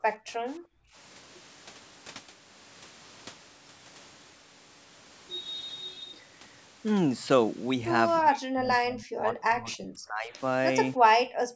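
At 0.40 to 0.46 s the echo canceller likely clamped down during double talk, producing speech suppressed in double talk: the voice dips by roughly 20 dB for a brief moment. At 0.74 to 0.95 s, background gated by the echo canceller appears as the canceller holds the microphone down while the loudspeaker plays, and the room sound drops by about 32 dB before returning. From 8.20 to 10.38 s, the likely cause is again both sides talking at once. The canceller turns down the talker for about two seconds, with the voice sinking by roughly 35 dB. At 11.09 to 11.14 s there is a short dip of roughly 30 dB. From 11.45 s to the end, the room sound gates out by about 40 dB.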